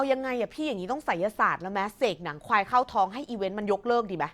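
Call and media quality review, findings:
Nothing stood out on listening to this speech recording.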